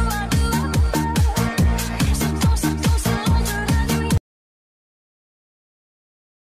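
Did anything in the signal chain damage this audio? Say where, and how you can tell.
Yes: an audio dropout to silence at 4.18 s runs to the end, leaving silence with no room tone, a flat waveform line. Likely a lost input device or link.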